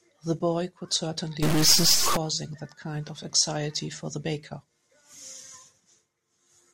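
Speech, with harsh, buzzy distortion and added noise under the quieter passages from 1.43 to 2.17 s, likely a stuck high-order bit offsetting samples by about -20 dBFS.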